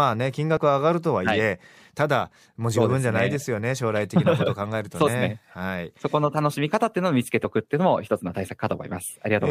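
At 0.56 s and again at 5.06–5.08 s the speech jumps forward where compressed frames were skipped. The decoder never played these blocks, either because they were missing from the stream or because they were rejected as corrupt. The first jump loses a short slice, consistent with one 23.2 ms frame. The second loses roughly 70 ms, which fits about three frames.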